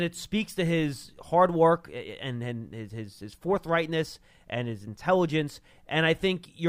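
Nothing stood out on listening to this speech recording.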